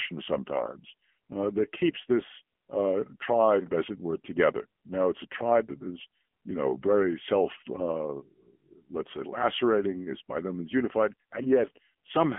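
Throughout the speech, the AMR narrowband mobile codec damage is plainly audible: nothing survives above about 3.6 kHz, and the low end thins below roughly 200 Hz, giving the boxed-in telephone band. The codec rebuilds the voice from a vocal-tract model excited by a few pulses per subframe, and at this depth the result sounds buzzy and synthetic, which fits a low mode near 7.95 kbps. A spectrogram shows a hard ceiling near 3.6 kHz with empty space above.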